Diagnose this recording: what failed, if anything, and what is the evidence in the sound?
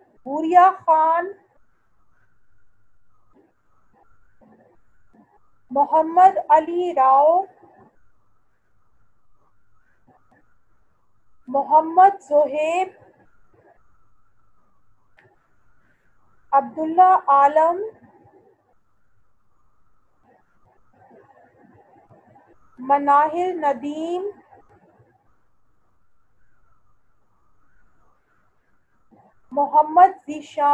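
Nothing failed in this recording; the sound offers no evidence of a fault at any stage.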